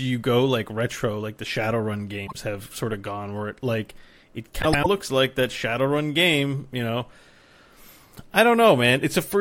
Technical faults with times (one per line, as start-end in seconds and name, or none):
2.27-2.36 frames out of order
4.62-4.87 frames out of order